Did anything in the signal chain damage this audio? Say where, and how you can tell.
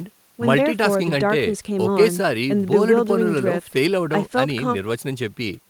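No, nothing I can hear points to any stage of the chain having damaged this speech.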